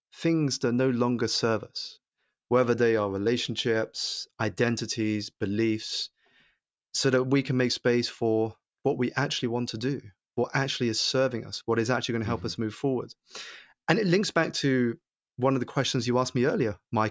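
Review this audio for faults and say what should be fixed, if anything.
Nothing here needs fixing: I didn't hear any technical fault anywhere in this speech recording.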